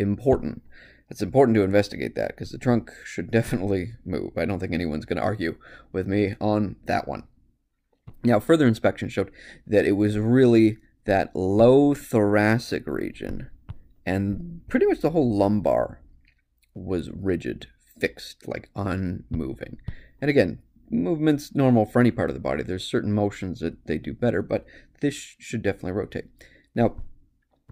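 No technical faults are audible anywhere in the recording.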